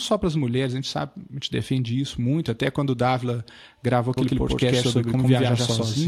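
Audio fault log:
4.17–6.08 s, doubled audio track: a second copy of the speech about 100 ms behind, at roughly equal level, starts abruptly, likely from a slower second capture path.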